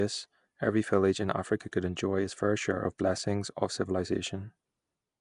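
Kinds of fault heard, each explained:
Nellymoser compression: The speech carries a rough, hissy haze and a smeared, underwater quality, with nothing above about 10.6 kHz. That points to the old Flash microphone codec, Nellymoser Asao, as the likely cause, at a rate that fits about 44 kbps. It codes short blocks with a fixed, small bit budget, starves the weaker bands and fills them with noise, so the damage here is plainly audible.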